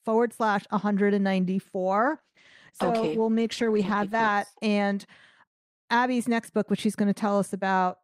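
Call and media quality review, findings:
Call bitrate drop, 2.06–4.39 s, recovering just before "thanks and". Speech turns rough and watery, with the top end muffled. Encoder side: the bandwidth estimate fell, and the coarser, band-limited sound points to a drop from 40 to 13 kbps, with the low held for about 2.3 s.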